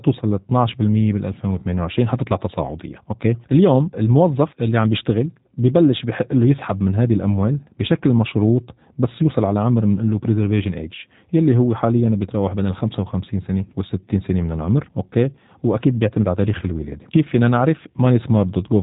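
Speech passed through the G.729 codec, which rebuilds each 10 ms frame from a filter model and a few pulses, at a rate that points to 8 kbit/s. Nothing above 3.8 kHz remains throughout, and the voice sounds plainly rough and synthetic.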